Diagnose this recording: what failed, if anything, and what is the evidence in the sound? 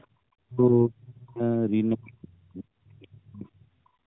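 A faint second voice, about 40 dB below the talker, appears at 0.01–0.06 s. This is likely other side's voice leaking through: loudspeaker echo the call processing's echo canceller failed to remove.

The room background dips by about 18 dB at 0.07–0.21 s and about 20 dB at 3.98–4.07 s. This is background gated by the echo canceller, which clamped the microphone while the loudspeaker played.

The talker's voice sinks by up to about 35 dB, thinning and breaking up, across 0.49–1.43 s and 1.93–3.7 s. This is speech suppressed in double talk, likely the canceller muting both sides at once.

A hoarse, gargly scratch at 2.56–2.65 s keeps pitch and level roughly intact. These are AMR bit errors on the network link: a few percent of flipped, unprotected bits across roughly seven 20 ms frames.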